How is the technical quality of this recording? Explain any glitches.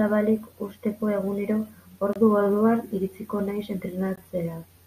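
The speech has two brief hard-edged dropouts, both gaps between stream segments. At 2.13–2.16 s and again at 4.16 s, silences of 23 ms and 18 ms cut in two seconds apart. Segment timestamps leave small holes that the player pads with silence, so no audio is actually lost.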